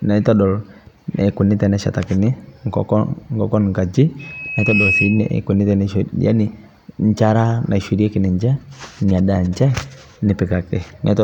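At 4.19 s a loudspeaker feedback squeal starts at 2.6 kHz. It swells within under a second, reaching roughly the speech level, until the mic-speaker loop breaks at 5.39 s.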